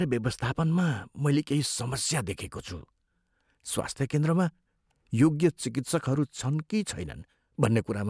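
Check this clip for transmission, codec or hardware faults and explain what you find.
No transmission, codec or hardware fault is audible anywhere in the speech.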